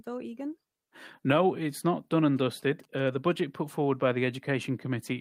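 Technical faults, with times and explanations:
2.37–3.33 s, GSM signalling bursts: a galloping run of ticks and brief buzzes at a 217 Hz repetition rate sits under the speech, around 30 dB below it. A nearby 2G handset transmitting short signalling bursts induces RF energy in the audio circuitry, where a nonlinear junction rectifies the pulsed carrier into its envelope. What remains is the burst timing, heard as clusters of dit-dit-dit interference that stop once the handset goes quiet.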